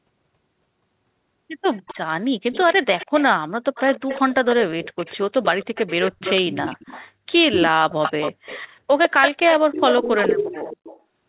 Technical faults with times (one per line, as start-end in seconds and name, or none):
1.73-1.98 echo leak
2.52-3.23 echo leak
3.75-8.62 echo leak
9.03-11.00 echo leak